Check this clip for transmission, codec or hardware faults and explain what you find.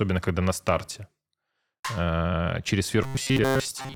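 One fault turns up, right at the tail end. From 3.04 s to 3.96 s, just after "э через", the speech becomes robotic sound from repeated short buffers: a stiff, metallic buzz at 133 Hz that only loosely follows the speech. That pitch fits a chunk of about 7.5 ms being replayed over and over, most likely because new audio arrived too seldom and the software filled the gaps by repeating itself. Around 70% of that stretch is repeated material rather than real audio.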